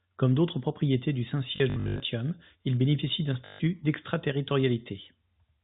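Packet loss with last packet repeated occurs at 1.56–2.0 s after "d'autres propriétés du" (260 ms lost in scattered runs up to 80 ms) and at 3.46–3.6 s after "il bénéficie d'un" (140 ms). Each gap is filled by replaying the last packet, which fits 20 ms packets. The result is a 50 Hz robotic stutter.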